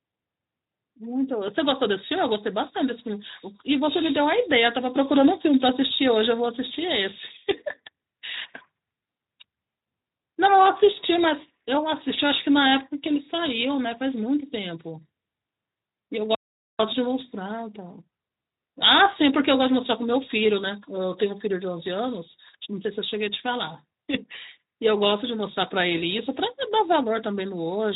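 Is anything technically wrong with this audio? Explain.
Yes. At 16.35 s the speech cuts out mid-flow and stays silent until 16.79 s, a gap of about 0.45 s, before the sound carries on. This is a playback stall. The output was likely starved of data or its playback thread was briefly blocked, so nothing reached the output until it recovered. Against the narrow, Speex-coded speech, band-limited to about 3.8 kHz, the dead gap stands out clearly as a break in delivery.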